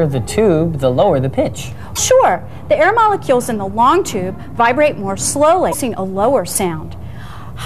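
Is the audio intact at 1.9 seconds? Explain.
No. From 1.92 to 1.99 s the audio is broken by damaged data in the compressed stream. For about 70 ms, part of the encoded data is wrong, whether lost, zeroed, overwritten or mixed with foreign bytes. The decoder misreads or rejects those frames and loses sync. It then searches ahead for the next valid frame header before normal decoding resumes. The result is a short chirp or blip that does not belong to the surrounding sound.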